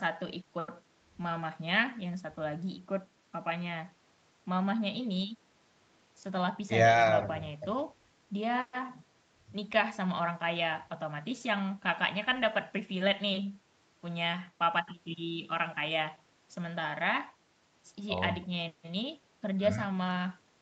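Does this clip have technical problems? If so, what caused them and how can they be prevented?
No, no technical faults here.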